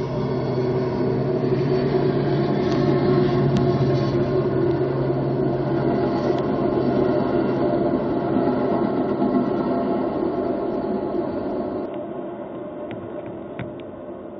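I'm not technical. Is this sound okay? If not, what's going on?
No. At 11.86 s the sound suddenly turns dull and boxy, as if heard through a phone. Nothing above 3.8 kHz gets through after that. It also gets a little quieter. This is likely an input switched to a poorer device.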